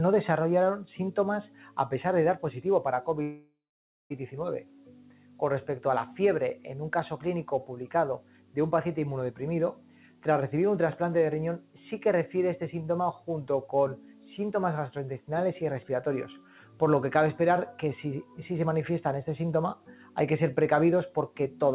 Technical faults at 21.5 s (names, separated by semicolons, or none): noise suppressor applied to music or sounds; sound cut by the noise suppressor